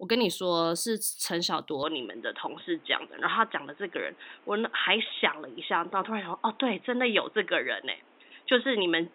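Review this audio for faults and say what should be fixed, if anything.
At 1.83 s the speech turns dull and boxy, and it stays that way to the end. From that point nothing is heard above 3.8 kHz. There is no gap at the change, and the loudness holds steady. A new background noise appears, roughly 30 dB below the speech. The likely cause is an input switched to a poorer device, such as a headset's call profile with a narrower band. To prevent it, lock the recording input to one microphone before starting.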